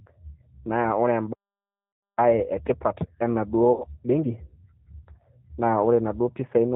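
Throughout, the speech carries plainly audible G.729 codec damage: the 8 kbit/s model rebuilds speech from filter and pulse parameters, leaving nothing above 4 kHz and a rough, synthetic edge. From 1.32 to 2.18 s a playback stall silences the output for about 0.84 s, likely because the player ran out of buffered data. Within that span, at 1.93 to 2.03 s, VoIP packet loss concealed by the speech codec covers a 100 ms gap, consistent with five 20 ms packets, by stretching the last pitch and filter into a fading buzzy tone or coloured noise. From 2.18 to 5.18 s a time-compressed catch-up plays the backlog at 1.15 times speed with unchanged pitch. A second concealed loss at 3.72 to 3.84 s bridges 80 ms, roughly four packets, with the same decaying concealment sound, and the speech stays weak or distorted briefly after it.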